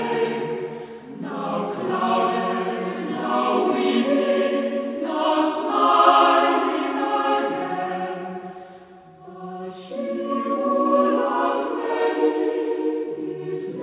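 Nothing here sounds wrong: it's just audio carried over a call link, with everything above 4 kHz gone the way you'd expect from a narrowband telephone codec like G.711 mu-law, and no dropouts, glitches or other trouble along the way.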